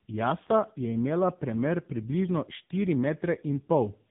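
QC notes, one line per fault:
Throughout, tandem speech coding: the speech passed through GSM full rate at 13 kbit/s, then G.711 A-law at 64 kbit/s, then AMR-NB at 7.95 kbit/s, so two low-rate speech coders worked one after the other, the second re-encoding the first one's already damaged output. Their errors stack, leaving the voice rough, dull and warbly. On a spectrogram nothing shows above 3.8 kHz, and harmonics look smeared and patchy rather than cleanly striped.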